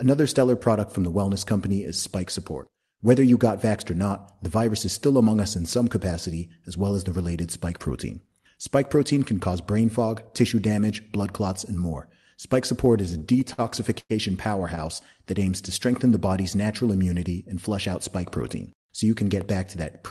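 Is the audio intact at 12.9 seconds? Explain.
No. From 12.85 to 13.61 s there are repeated stalls (stutter): packets arrived late, the jitter buffer ran dry seven times, and each time the last sound was stretched to fill in, about 126 ms in all, none longer than 50 ms. Nothing's lost, but it drags and hiccups.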